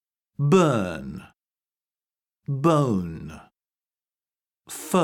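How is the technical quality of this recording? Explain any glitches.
Nothing glitchy turns up here; the audio runs along without any dropouts, clicks or other technical hiccups worth pointing to.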